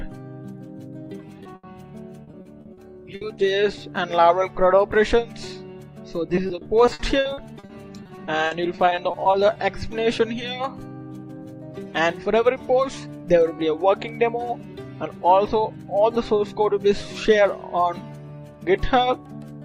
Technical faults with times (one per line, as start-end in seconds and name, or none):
1.43-1.47 short concealed packet loss
1.55-1.65 burst of packet loss
2.23-2.79 repeated packet loss (robotic sound)
3.15-3.23 burst of packet loss
3.35-3.39 short concealed packet loss
6.35-9.57 repeated packet loss (robotic sound)